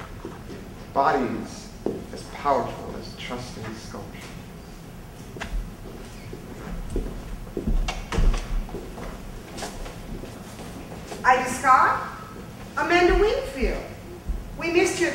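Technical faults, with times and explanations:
No technical faults can be heard anywhere in the recording, and the signal stays steady and intact from its opening moment to its last.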